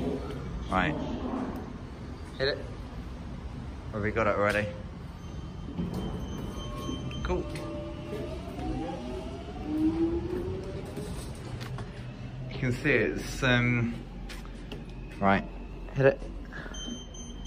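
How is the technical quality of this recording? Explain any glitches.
No glitches can be heard, and the recording's technical quality holds up throughout.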